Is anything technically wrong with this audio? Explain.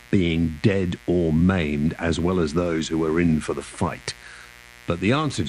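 Yes. Mains buzz runs through the whole speech clip: something in the chain lets sharp 60 Hz switching spikes in twice per cycle, stacking harmonics up to several kHz. The result is a steady, raspy buzz roughly 25 dB under the speech.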